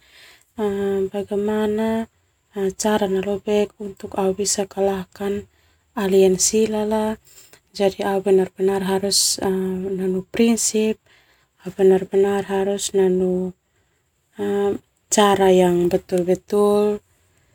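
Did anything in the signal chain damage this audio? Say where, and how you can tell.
No, nothing in the signal chain damaged this audio, and no stage shows audible evidence of harm.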